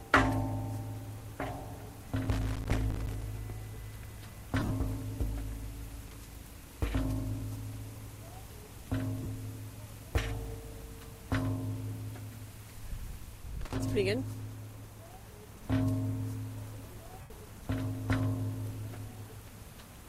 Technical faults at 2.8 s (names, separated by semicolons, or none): loose connector crackle